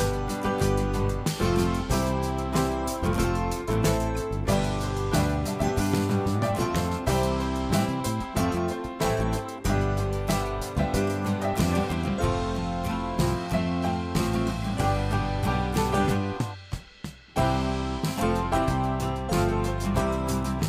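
No technical faults turn up anywhere in the recording.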